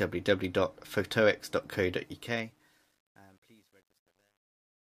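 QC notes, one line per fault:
1.98–4.93 s, truncation distortion on a fade: the fade-out tail turns gritty from 2.58 s, as its steps coarsen undithered, fitting 10-bit resolution.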